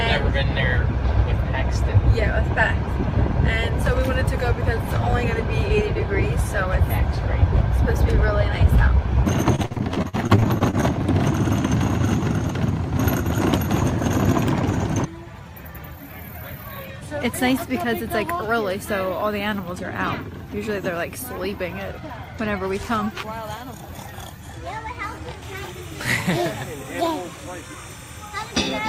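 Repeated packet loss (robotic sound) runs from 9.55 to 10.84 s. Packets keep going missing or arriving too late, and each hole is covered by stretching the sound that came just before it. The holes come in quick succession, the longest about 48 ms, so patched audio fills roughly 29% of that stretch. The result is a choppy, robotic texture with small pieces of the sound missing.

Timecode bleed starts at 25.42 s and continues to the end. Linear timecode from a nearby track or cable is leaking into the audio. The code is a square wave that flips between tones around 1 kHz and 2 kHz, and its rhythm fits 29.97 fps code. It sits about 25 dB below the wanted sound as a steady chirping warble in the background.

Jitter buffer speed-up occurs from 26.83 to 27.76 s, while the timecode warble is still present. The receiver's buffer had built up more audio than its target, so it cut out tiny slices of the waveform, one or a few pitch periods at a time, over and over. 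In total about 70 ms is removed. Playback runs at about 107% speed with the pitch unchanged, so this passage sounds slightly rushed.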